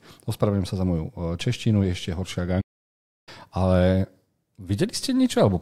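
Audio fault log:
2.61–3.29 s, playback stall: the speech stops abruptly in mid-flow and the output goes silent for about 0.66 s before continuing, likely because the player ran out of data or its thread was blocked. The cut in mid-flow sets it apart from a natural pause.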